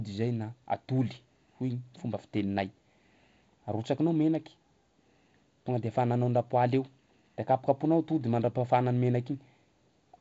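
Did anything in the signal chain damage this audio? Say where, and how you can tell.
No, nothing in this speech recording stood out on listening as damage from any stage of the signal chain.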